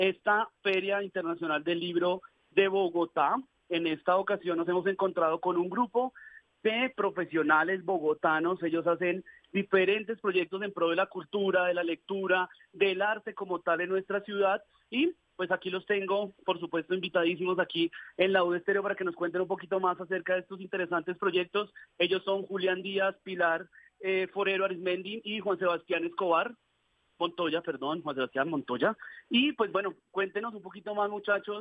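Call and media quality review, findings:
No audible faults found.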